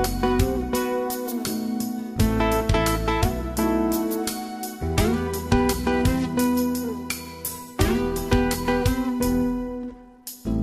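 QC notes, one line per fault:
4.07 to 6.61 s and 9.77 s to the end, Bluetooth SBC bit pool drop: the top end dulls abruptly and a gritty, grainy noise rises under the sound, then clears at 6.61 s; the second episode is still running when the clip ends. The link was congested, so the sender cut the SBC bit pool, which fits a drop from 28 to 14, or about 108 kbps. The highest sub-bands lost their bits and the rest were coarsely quantised.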